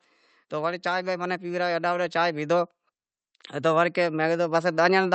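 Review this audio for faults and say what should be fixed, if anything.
Level and background swell together from 0.49 to 2.73 s, up about 6 dB, and again from 3.29 s to the end: automatic gain rising, with AGC slowly boosting a quiet input. To prevent it, raise the input level at the source, or disable or slow the automatic gain control.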